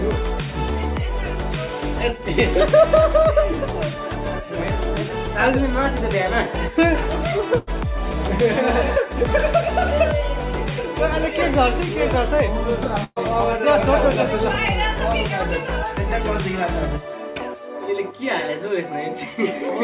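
Bursts of packet loss at 7.58, 13.04 and 17.30 s drop about 90, 120 and 60 ms; each gap is bridged by a fading continuation of the preceding sound, the second ending in brief silence, on a G.711 A-law path with nothing above 4 kHz.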